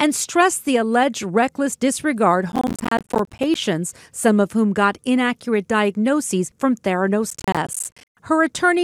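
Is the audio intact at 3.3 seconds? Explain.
No. At 3.3 s the audio sits inside a processor overload crackle running from 2.52 to 3.55 s. The processor repeatedly misses its deadlines for short buffers of around 10 ms, leaving dozens of brief silent gaps whose hard edges combine into a gritty, tearing crackle.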